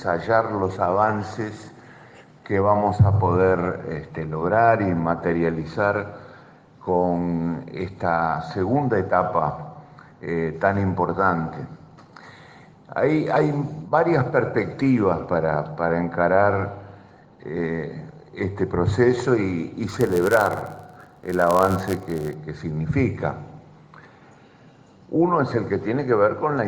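From 19.87 s to 22.34 s, a block size mismatch (padded) occurs: one stage delivers blocks slightly shorter than the next reads, and zeros fill each remainder. The repeated tiny gaps make a 99.6 Hz buzz, and the audio slows to 0.996× at near-normal pitch.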